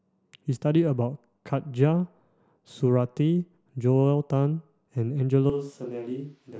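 At 5.50 s the speech suddenly turns roomy and hollow, thinner in the bass and about 10 dB quieter, with background noise now sitting around 35 dB under it, right to the end. That's a switch to a distant microphone, likely because the close mic's feed dropped out.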